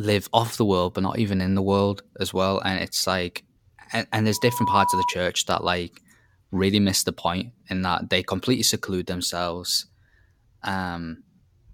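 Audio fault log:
4.32–5.15 s, loudspeaker feedback squeal: after "it's like and and", the microphone picks up its own loudspeaker and the loop gain passes unity near 976 Hz, so that tone swells within about 0.4 s to a few dB above the speech, stopping before "that like really miss".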